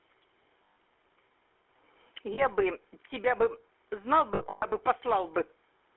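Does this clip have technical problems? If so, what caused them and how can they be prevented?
Yes. The GSM full-rate codec adds a buzzy, gravelly roughness throughout and confines the sound to a 300 Hz to 3.4 kHz band, consistent with 13 kbps full-rate coding. Prevent this by carrying the call on a wideband, higher-rate codec.

Lost GSM frames at 0.64 to 0.76 s, 2.34 to 2.44 s, and 4.34 to 4.65 s were concealed by repeating the last good frame, which produces a rough, metallic ring. The last stretch consists of scattered losses, the longest about a tenth of a second. Prevent this with stronger radio coverage or better error protection on the link.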